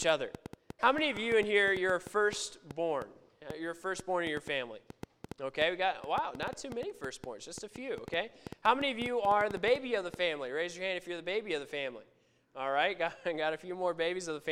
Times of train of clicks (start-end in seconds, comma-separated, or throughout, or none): 0.02-10.15